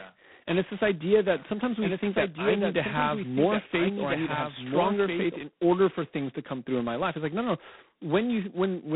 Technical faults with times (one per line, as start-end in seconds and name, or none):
0.00-8.95 G.726 ADPCM
1.34-5.36 doubled audio track